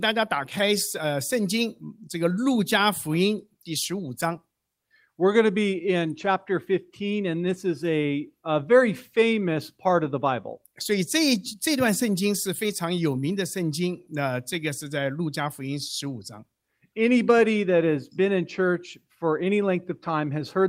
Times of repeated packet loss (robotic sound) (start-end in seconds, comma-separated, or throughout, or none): none